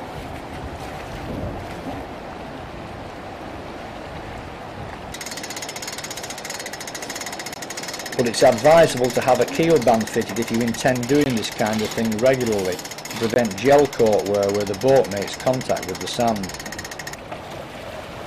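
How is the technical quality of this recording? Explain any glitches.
The recording has three brief dropouts. Blocks of digital silence occur at 7.54 to 7.56 s, 11.24 to 11.26 s and 13.34 to 13.36 s, each a 20 ms run of zeros. This happens when the output buffer isn't filled in time or a calculation yields invalid values. The audio cuts out and returns with no fade, heard as a short hole.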